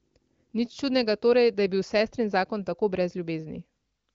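Speech over HD Voice; no faults can be heard.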